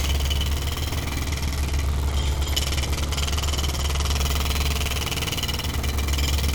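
From 1.26 s to 4.17 s the audio goes through a Bluetooth SBC bit pool drop. The link was congested, so the sender cut the bits per frame, which points to a fall from a bit pool of about 31 to about 14, near 99 kbps. The highest sub-bands get little or nothing and the rest are coarsely quantised, so the treble dulls and a gritty noise rises. A codec switch to a narrowband mode would also dull the sound, but here the grit comes with the dulling and full brightness returns at 4.17 s.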